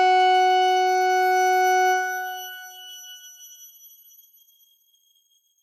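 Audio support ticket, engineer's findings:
Nothing stood out on listening to this audio.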